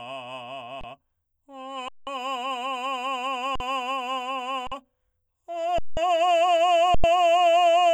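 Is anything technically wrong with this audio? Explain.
Yes, the music drops out six times with underruns with held samples, at 0.81–0.84, 1.88–2.07, 3.56–3.60, 4.67–4.72, 5.78–5.97 and 6.95–7.04 s, lasting from 25 to 186 ms. Each time the output buffer ran dry and the converter froze on its last value, so the music goes flat and silent without a hard click. Nothing seems skipped, and it picks up right where it paused. The longer gaps fit 2048 to 8192 samples at 44.1 kHz.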